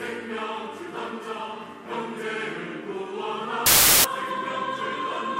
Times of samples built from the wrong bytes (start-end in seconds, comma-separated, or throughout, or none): 3.66-4.04